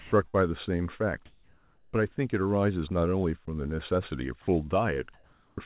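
Right at the start, from 0.0 to 0.12 s, the sender's voice detector likely mistook the opening speech for background and stopped transmitting. The receiver filled those 120 ms with synthetic comfort noise, so about 70 ms of speech is simply absent. Steady noise or near silence stands where the speech should be before the talker is heard. The same sound dropped by the voice detector recurs twice, more briefly. At 3.46 s a 20 ms stretch is swapped for noise, costing about 10 ms of speech. From 4.42 to 4.48 s, 60 ms are replaced and about 50 ms of speech lost, leaving small noisy holes inside the speech.

At 0.28 to 0.36 s comes a burst of packet loss. Audio arrived too late or not at all, and the receiver extended the last sound for 55 ms while fading it. That stretch is a brief held, decaying sound. The speech then picks up again with about 60 ms skipped, so the continuity jumps.

Between 1.26 and 1.94 s there is comfort noise in place of the background. 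The sender, likely under discontinuous transmission, stopped sending during a pause. For 680 ms the receiver substituted shaped noise for the real room sound, which sits about 36 dB below the loudest speech. The substitute is steady and textureless and comes in about 3 dB louder than the true background, so the pause hisses up. It happens again from 5.14 to 5.58 s for 440 ms, this time about 2 dB quieter than the real background, so the ambience sinks slightly.

At 5.56 s, as that noise ends, the onset clipped by the voice detector appears. Being likely slow to register the restart, the detector withheld the first 20 ms. The returning speech therefore begins abruptly, without its soft attack. Throughout, the call path's narrowband G.711 coding leaves nothing above 4 kHz, which gives the speech its telephone-like dullness.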